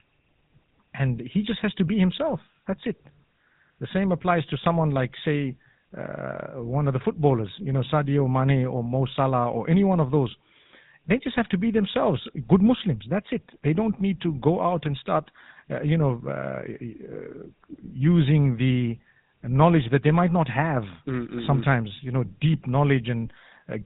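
From start to finish the speech carries GSM full-rate codec damage, plainly audible. The vocal tract is modelled and excited by sparse regular pulses, giving a buzzy, gravelly roughness. A spectrogram shows nothing above 4 kHz and a coarse, smeared harmonic structure, and the low bitrate points to 13 kbps.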